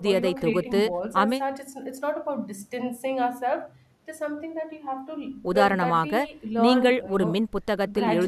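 No technical faults are audible anywhere in this speech recording.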